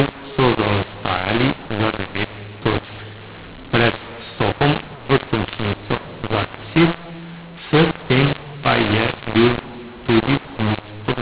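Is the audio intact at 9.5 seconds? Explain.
No. The mu-law and A-law mix-up runs through the whole clip, including 9.5 s: mu-law samples decoded as A-law scramble levels, making speech harsh and filling pauses with noise.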